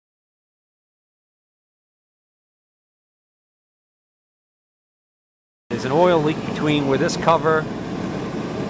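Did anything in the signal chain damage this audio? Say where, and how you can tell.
No, nothing in the chain audibly damaged this audio, and there's no stage I can point to as having left a mark on it.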